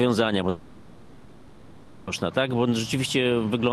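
From 0.49 s to 2.09 s the sound turns into a buzzy, hissing continuation of whatever preceded it, fading to a low steady noise without reaching true silence. This is likely a long network dropout: about 1.6 s never arrived and was concealed, and the sound resumes past the lost section.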